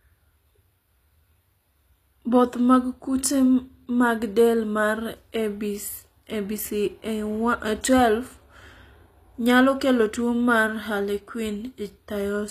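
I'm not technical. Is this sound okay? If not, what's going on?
No, not quite. Throughout the clip, the speech shows plainly audible damage of the kind typical of HE-AAC compression, which is likely the cause. This format keeps only the lower part of the sound properly and rebuilds the treble by copying lower bands upward, so the hiss of s sounds comes out gritty or metallic rather than natural. Nothing at all remains above about 14.9 kHz, so the very top air is missing.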